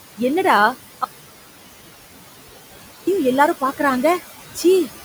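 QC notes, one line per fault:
throughout: noise suppressor artifacts. The background is pulled down by about 16 dB wherever it reads as steady noise, so the room sound dips between phrases and swells back under the speech.
1.04–3.07 s: audio dropout to a faint residue. The speech cuts off abruptly for about 2.0 s and only hiss remains, roughly 40 dB below the signal, before the speech snaps back in mid-flow. The hard edges rule out a pause or fade; likely a break in the source while the downstream path stayed live.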